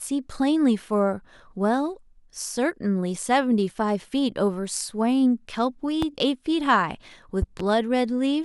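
Speech clip with a loud pop at 6.02–6.05 s and a double pop at 7.42–7.62 s, each peaking roughly 10 dB above the speech, likely from a voltage spike or glitch.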